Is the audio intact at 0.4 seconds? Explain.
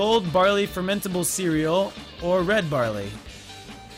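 Yes, the audio is intact at 0.4 seconds, with no fault present at that moment.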